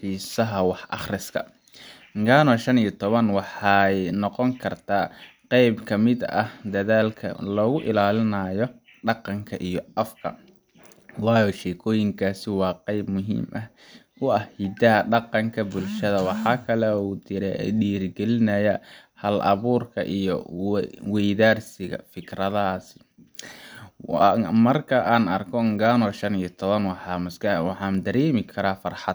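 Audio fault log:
No faults can be heard anywhere in this speech recording. Nothing in it calls for a time, a range or an entry of its own.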